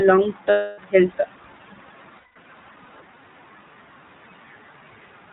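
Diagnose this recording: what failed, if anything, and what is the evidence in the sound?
iLBC codec, throughout: a codec-stage fault. The speech is band-limited below 4 kHz and plainly rough and synthetic, which fits iLBC's 20 ms, 15.2 kbps mode.

Lost iLBC frames, 0.50–0.79 s and 2.18–2.37 s: a network-stage fault. Each gap becomes a held, buzzy vowel, 280 ms then 180 ms, as the decoder repeats the last pitch cycle, then recovers at once.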